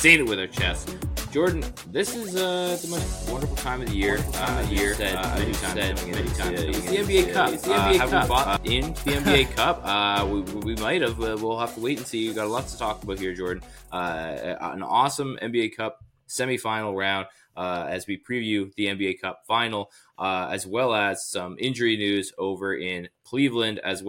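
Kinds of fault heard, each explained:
Doubled audio track: an equally loud copy trails about 0.7 s behind from 4.09 to 8.57 s, cutting in and out abruptly, likely from a slower capture path.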